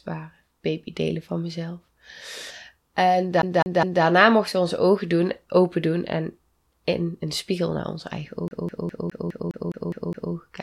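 From 3.42 to 4.04 s, just before "mochten we onze ogen", the speech sticks like a CD stuck on one turn: a scratch keeps knocking the laser back one track, so the same 0.21 s of sound plays three times with a brief mute at each jump. After "spiegel naar onze eigen", from 8.48 to 10.34 s, it loops nine times. On a waveform and spectrogram this shows as identical 206 ms blocks separated by thin gaps.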